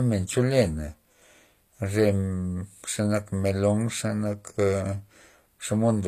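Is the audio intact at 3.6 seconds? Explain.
No. At 3.6 s, as across the whole clip, the speech carries plainly audible damage from likely HE-AAC compression, with nothing above 14.9 kHz. Treble is rebuilt by copying lower bands upward, so s sounds turn gritty and lispy, consistent with a bitrate near 24 kbps.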